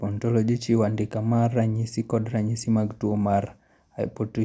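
Speech, no audible technical faults anywhere in the recording, nothing to flag.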